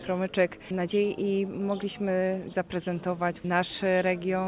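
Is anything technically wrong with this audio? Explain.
No, nothing technical stands out here; it all sounds fine as it is.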